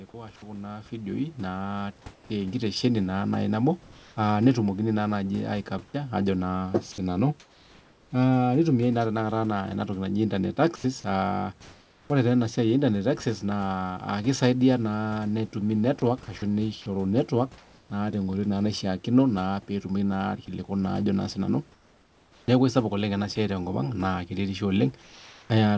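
A speech recording whose first ten seconds are shaped by automatic gain rising: from 0.1 s to about 10.2 s voice and room noise swell together by about 11 dB. Because both rise at once and slowly, this is a gain control lifting a signal it judged too quiet, not someone moving closer to the microphone, which would raise the voice but leave the background steady.

In the pauses there is comfort noise in place of the background at 2.14–2.30 s, 3.82–4.16 s, 10.76–12.10 s, 21.72–22.48 s and 25.02–25.50 s. The real room noise, which sits about 32 dB under the speech, gives way to a smooth, featureless hiss. It is about 6 dB quieter at the first gap, about 1 dB at the second, 3 dB at the fourth and 2 dB at the fifth. The texture change, not just the level, separates this from the room itself going quiet. It is likely the result of discontinuous transmission, where the receiver synthesises noise while the sender is silent.

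Sound chopped by the voice detector occurs from 5.92 to 8.12 s and again from 16.00 to 17.90 s. Quiet syllables and word edges repeatedly flicker out to synthetic noise, about 0.78 s lost in the first stretch and 0.44 s in the second. It is the repeated switching within one stretch that marks it as likely chopping rather than a single dropout.

Sound dropped by the voice detector is a single 80 ms gap at 10.76 s. Soft speech there was likely treated as background and replaced by noise, opening the longer comfort-noise stretch that follows.

Throughout, nothing above 8 kHz, which points to a wideband codec such as G.722 at 64 kbps.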